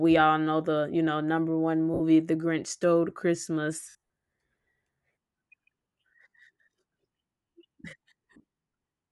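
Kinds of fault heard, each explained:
Bluetooth LC3 compression: The speech has a breathy, grainy edge throughout, with the upper band thinned out and replaced by noise-like fill. This plainly audible damage likely comes from LC3 transform coding in 10 ms frames at a bitrate around 48 kbps.
Lost LE Audio frames: Where frames go missing, the decoder repeats the last spectrum with randomised signs. Gaps occur at 1.94 s (60 ms), 3.84 s (broken up over about 260 ms), 6.29 s (40 ms) and 8.34 s.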